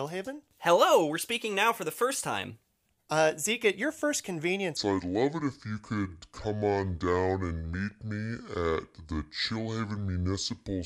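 From 4.77 s, just after "at your first", to the end of the speech, a section at the wrong speed plays at 0.66 times its recorded rate, likely because it was fitted to the wrong clock. Pitch drops roughly seven semitones, and the voice turns deep and dragging. On a spectrogram the harmonics and formants step down and stretch sideways. The waveform's syllables spread out.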